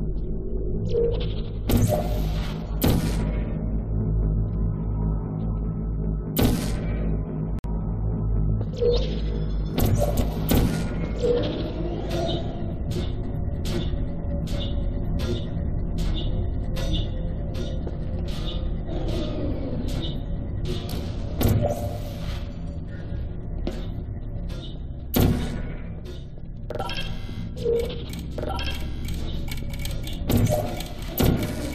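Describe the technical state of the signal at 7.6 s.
A gap at a join of encoded pieces runs from 7.59 to 7.64 s: a gap of about 53 ms from untrimmed encoder delay and padding. Unlike a dropout, the sound resumes exactly where it stopped.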